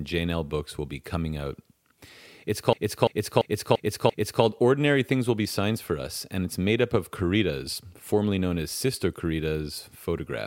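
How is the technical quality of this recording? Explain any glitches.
The recording has one clear glitch, a system hang loop, between 2.73 and 4.44 s. A 341 ms slice of speech repeats exactly five times, about 2.9 times per second, as the audio path stalls and replays its buffer. The length fits a 16384-sample buffer. It sounds like a rhythmic stutter. The waveform and spectrogram show identical blocks tiled side by side, and little or no audio appears to be lost.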